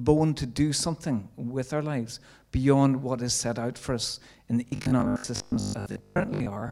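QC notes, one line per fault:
4.68–6.70 s, robotic sound from repeated short buffers: right after "out for us in", the speech becomes a rigid metallic buzz at 50 Hz that loosely follows the words. About half the audio is a 20 ms stretch played again, likely because new audio arrived too slowly.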